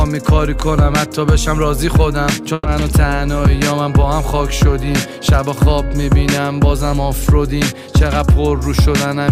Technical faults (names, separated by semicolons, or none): burst of packet loss